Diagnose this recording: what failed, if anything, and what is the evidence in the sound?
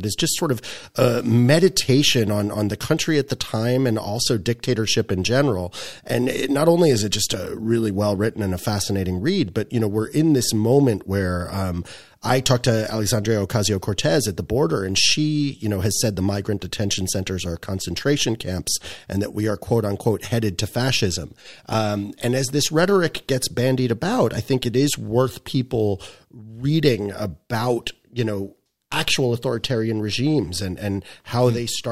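Nothing failed: no stage from capture through to playback leaves an audible defect anywhere in the speech.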